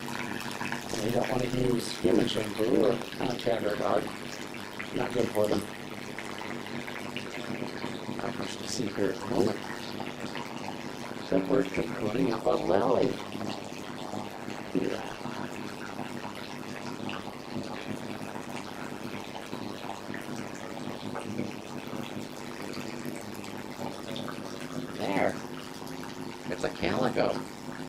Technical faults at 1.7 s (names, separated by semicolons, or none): overlap-add ripple